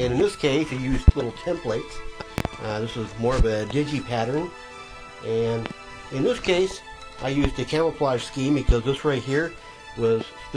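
Sharp loud pops punch well above the sound at 1.08–1.12 s, 2.38–2.49 s (a quick double pop), 5.66–5.70 s, 7.45–7.48 s and 8.69–8.73 s, peaking roughly 15 to 25 dB over it. The audio carries on underneath. The likely cause is sudden voltage pulses from a switch, static or a driver glitch.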